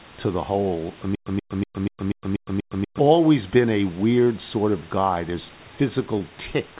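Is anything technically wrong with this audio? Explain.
Yes. From 1.15 to 2.99 s, just after "to the hole I", there is a stutter with silent gaps. A burst of about 130 ms repeats seven times, each followed by roughly 111 ms of digital silence, so it returns every 242 ms until "been a" resumes. This is likely a stalled player or stream that replays its last buffered fragment on each retry and then runs dry. Whatever should have played in that span is gone.

Short concealed packet loss occurs at 4.24 to 4.28 s, between "been a" and "sort of guy", and again at 6.18 to 6.22 s. Each time about 20 ms of audio failed to reach the decoder, and the receiver covered the gap by extending the preceding sound before blending back into the real signal. Through this narrowband call path, with nothing above 4 kHz, each one is heard as a brief smear or wobble in the speech.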